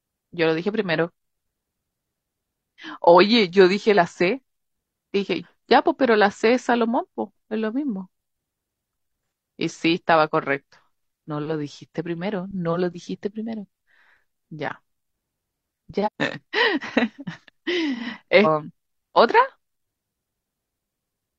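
Damaged data in the compressed stream knocks the decoder out of sync at 5.40–5.45, 16.02–16.08, 18.41–18.47 and 20.72 s, leaving a brief chirp, squawk, click or short hole in the speech each time.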